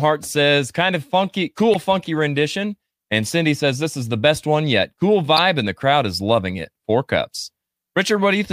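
Speech clip with damaged data in a compressed stream. Short glitches sound at 1.73 to 1.76 s, after "says kind of funky", and 5.37 to 5.39 s, before "and the crowd is". Corrupt frames break the decoder's sync.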